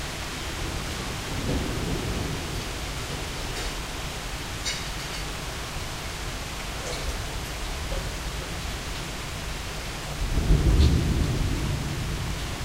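No technical faults can be heard anywhere in this audio.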